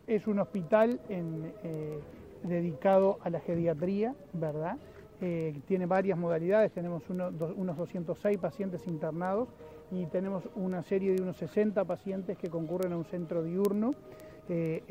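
From 0.18 to 14.84 s, word clock ticks recur about ten times a second: an unlocked receiver clock, roughly 200 ppm off, slips one sample each time, leaving evenly spaced thin vertical lines and short spikes.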